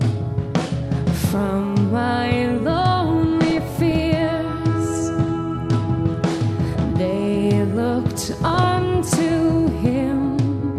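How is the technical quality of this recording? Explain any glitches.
The recording suffers from DAB burbling in three bursts: 3.42 to 4.03 s, 6.64 to 6.76 s, and 8.28 to 8.64 s. Weak reception lets a small fraction of bit errors, well under one percent, slip past error correction into the MP2 data. Corrupted samples put short blips of noise in single sub-bands, and corrupted scale factors make sub-bands leap in level for up to a frame, giving short blips of noise over the sound.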